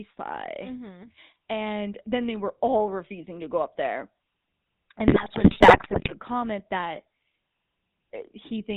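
GSM full-rate codec coding runs through the whole speech clip. The plainly audible coding fits a 13 kbps stream that models the vocal tract and drives it with sparse, regularly spaced pulses. It cuts everything above 4 kHz and leaves a buzzy, gravelly roughness on the voice.

GSM bit errors strike from 5.08 to 6.19 s, where the damage points to about 3.3 percent of bits flipped across a long run of frames. Corrupted filter, pitch and gain values warp the spectrum and spike the level, so the voice breaks into squawks, pops and gargling.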